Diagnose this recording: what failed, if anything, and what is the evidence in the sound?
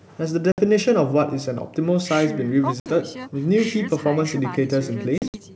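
The network stage failed, with packet loss on an ADPCM call. The speech drops to hard-edged silence at 0.52 to 0.61 s and again at 2.80 to 2.90 s, each gap about 60 ms. Near the end, from 5.18 to 5.41 s, about 100 ms goes missing in scattered holes, the longest about 60 ms. Each gap fits a few lost packets. After each hole the decoder's predictor and step size no longer match the sender's. The speech comes back slightly distorted, then settles within tens of milliseconds.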